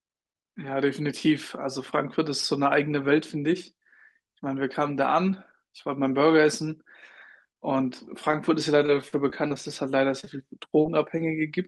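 Speech carried over a WebRTC call path, with its codec band limit pointing to Opus at around 32 kbps with audio up to 12 kHz, develops several packet-timing faults late in the clip. At 8.31 to 8.35 s a short stall from a late packet holds the current sound about 20 ms too long, with a slight buzz or dip. The jitter buffer ran dry, the receiver stretched what it had, and playback resumed from the same point once the packet arrived. Nothing is lost; the delay simply grows by 20 ms. That distinguishes it from concealed loss, where sound actually goes missing. From 8.86 to 9.52 s comes repeated packet loss, heard as robotic sound. Five gaps fall in quick succession, the longest 38 ms, totalling about 80 ms of missing audio, and roughly a sixth of the stretch is synthesized. Because each hole is followed soon after by the next, the result is choppy rather than a single blip. That clustering is what separates it from isolated losses. 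Short concealed packet loss then appears as a pair running back to back at 10.20 to 10.25 s and 10.25 to 10.28 s, and again alone at 10.82 to 10.86 s. Each drops 20 ms of audio, and the decoder extends the preceding sound before blending back. The result is a brief smear or wobble in which a short consonant can vanish, unlike the lossless stretch of the stall.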